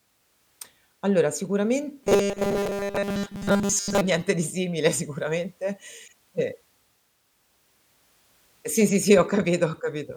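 From 2.03 to 4.01 s, ending just before "niente di simile sicuramente", the speech becomes a stiff metallic buzz fixed at 200 Hz. This is robotic sound from repeated short buffers. Audio likely arrived too seldom, so a 5 ms slice looped through most of that stretch.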